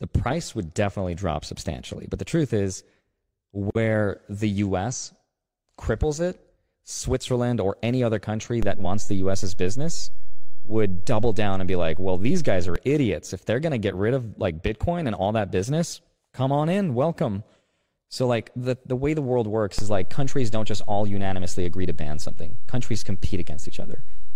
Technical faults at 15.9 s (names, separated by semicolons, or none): damaged data in a compressed stream